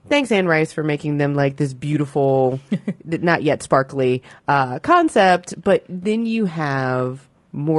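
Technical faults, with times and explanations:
Throughout, low-delay AAC compression: the speech sounds rough and grainy, with noise between the harmonics. Short frames likely starve it, fitting AAC-ELD near 32 kbps.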